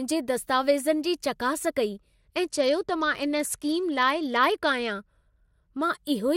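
From 1.97 s to 5.83 s the treble dulls and a gritty noise rises under the speech. This is a Bluetooth SBC bit pool drop: with the bit pool cut from 31 to about 12, which fits roughly 88 kbps, the top sub-bands starve and the remaining ones are coarsely quantised.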